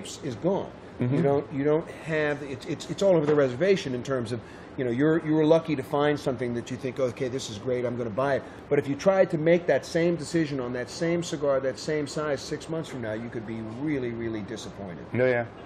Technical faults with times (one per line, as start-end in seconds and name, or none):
none